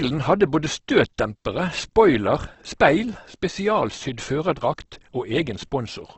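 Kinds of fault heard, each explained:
Opus compression: The speech is heavily degraded throughout, with a grainy, rough texture and noisy fill where finer harmonic detail should be, and nothing above 8.2 kHz. This is likely the codec's music (CELT) mode starved of bits. It preserves each band's overall energy but substitutes noise or folded copies of lower bands for the real content. The damage level and wideband limit fit a very low bitrate, around 12 kbps.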